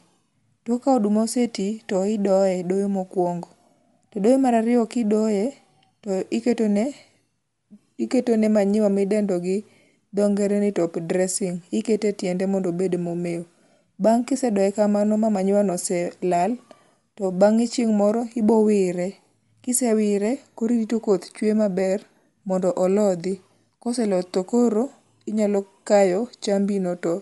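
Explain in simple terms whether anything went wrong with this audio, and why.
The speech was likely squeezed by Bluetooth LC3 compression from start to finish, which cuts everything above 11.6 kHz and leaves a plainly audible grainy, breathy edge.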